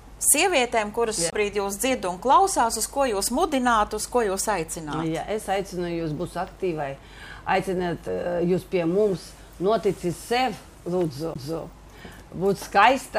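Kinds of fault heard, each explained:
CD skip: the laser jumps to another disc turn, so the sound briefly mutes and resumes elsewhere; the waveform shows short flat gaps, the spectrogram vertical click lines.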